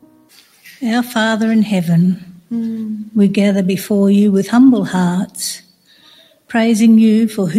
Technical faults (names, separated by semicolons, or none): noise suppressor applied to music or sounds; sound cut by the noise suppressor